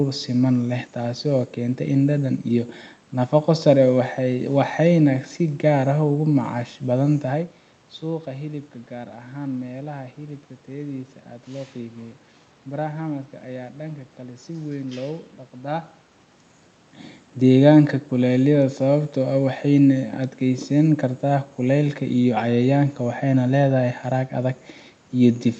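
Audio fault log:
No fault to log for this audio.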